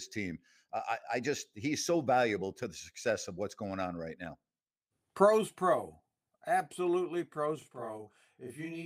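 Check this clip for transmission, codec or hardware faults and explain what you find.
One fault is present: a channel delay (doubling) from 7.62 s to the end at 8.85 s. One channel arrives 40 ms late and the two are summed to mono, so the speech is heard twice at equal level. Unlike reverb, there is one distinct repeat with no decaying tail, and the gap is too long to sound like comb-filter colouration.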